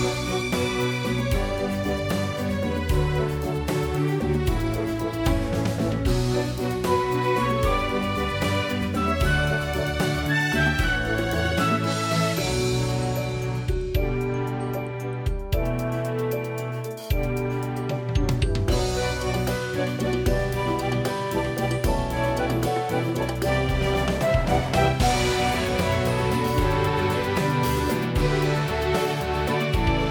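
No technical faults detected.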